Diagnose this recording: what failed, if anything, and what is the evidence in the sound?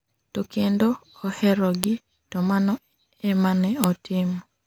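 Storage stage: file header played as audio. Sharp clicks at 1.84 s and 3.84 s, 2 s apart. Each joined piece's header bytes play as samples.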